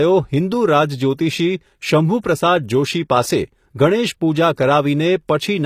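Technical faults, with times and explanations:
Throughout, HE-AAC compression. The speech has plainly gritty, lispy s sounds and a bright but synthetic treble, with nothing above 14.9 kHz. The likely cause is spectral band replication copying lower bands upward to rebuild the treble, which fits a bitrate around 24 kbps.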